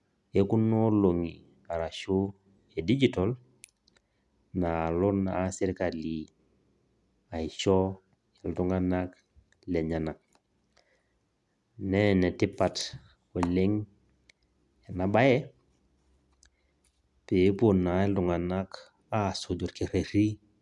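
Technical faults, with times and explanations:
No technical faults found anywhere in the speech; nothing to log.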